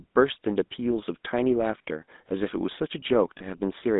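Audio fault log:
Throughout: GSM full-rate codec. Band limited to 200 Hz–3.7 kHz, consistent with 13 kbps coding. Pulse-driven excitation gives plainly audible buzzy roughness; spectrogram shows smeared harmonics and empty bands above 3.7 kHz.
3.38–3.58 s: lost GSM frames. Last good frame is repeated, giving a metallic ring, consistent with one lost 20 ms frame. Spectrogram shows frozen, repeating spectral bands.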